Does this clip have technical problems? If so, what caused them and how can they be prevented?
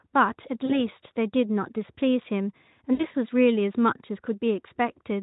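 Yes. VoIP packet loss concealed by the speech codec occurs at 0.65–0.81 s and 2.93–3.06 s. Lost stretches of 40 ms and 60 ms are filled by extrapolating the last pitch and filter at falling gain, giving a buzzy or noise-like, fading smear. Forward error correction or packet redundancy prevents it.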